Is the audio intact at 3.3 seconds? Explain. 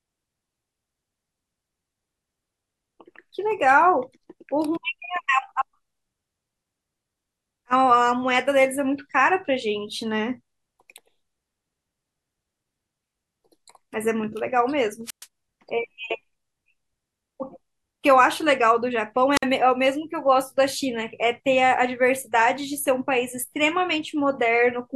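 Yes, the speech at 3.3 seconds plays through intact, with no dropout, click, distortion or other fault at that moment.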